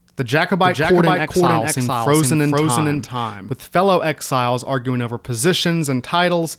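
From 0.63 to 3.51 s the speech repeats half a second later at similar level, a doubled audio track likely captured twice.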